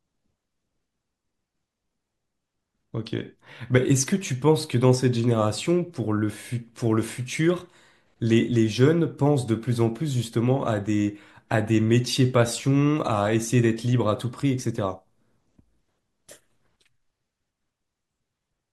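Speech recording with no audible technical faults.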